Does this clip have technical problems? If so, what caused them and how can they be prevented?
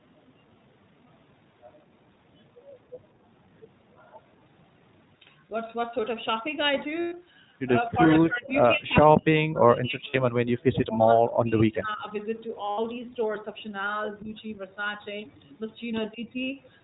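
Yes. The whole call passed through the iLBC codec, which strips everything above 4 kHz and rebuilds each frame's excitation independently. The speech is narrowband, rough and plainly synthetic, which fits iLBC's 15.2 kbps mode with 20 ms frames. Prevention: use a wideband codec such as Opus when both ends support it.

Lost iLBC frames appear at 7.00–7.13 s (about 120 ms), 10.10–10.16 s (40 ms), 12.70–12.80 s (80 ms) and 15.02–15.05 s (20 ms). The decoder filled each gap by repeating the last pitch cycle mixed with noise, so each one sounds like a brief held, buzzy vowel before the speech snaps back. Prevention: reduce packet loss on the network path and add forward error correction or redundancy.

Speech suppressed in double talk shows as dips at 7.87–8.55 s, 8.73–9.30 s, 9.47–12.13 s, 14.23–14.40 s and 16.13–16.20 s. The first three go as deep as about 30 to 40 dB, and the last two are only about 10 dB. 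The talker's level drops, most likely because the echo canceller mistook simultaneous far-end talk for echo and attenuated everything. Prevention: use an echo canceller with better double-talk detection, or use headsets so there is less loudspeaker echo to remove.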